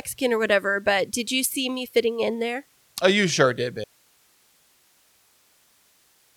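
At 3.84 s, right after "you sure did", the speech cuts off abruptly and never returns: an audio dropout to a faint residue that runs to the end of the clip. Only hiss remains, roughly 40 dB below the speech, which likely means the signal feed was lost while the channel stayed live. The waveform collapses at once to a thin, flat band, and the spectrogram loses all speech structure, leaving a faint, even wash of broadband noise.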